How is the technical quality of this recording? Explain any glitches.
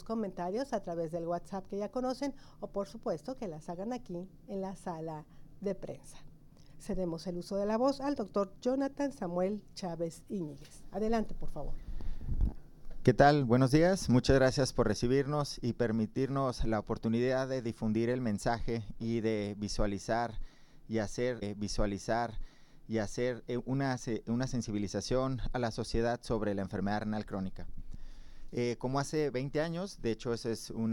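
There is one glitch, a stream segment repeated. It runs from 21.41 to 23.41 s. At that point the player took the same chunk of the stream twice. It either fetched it again or queued it a second time. So about 2.0 s of audio plays once more, and the clip grows by that much. You hear a small blip where playback jumps back. Then the last two seconds or so play again, exactly as before.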